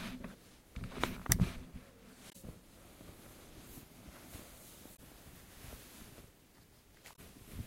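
Damaged data in a compressed stream breaks up this recording of sounds at 2.29–2.36 s, 4.93–5.00 s and 7.12–7.19 s, each a brief glitch of about 70 ms. Corrupted bytes there make the decoder misread frames and lose sync until it finds the next valid frame header.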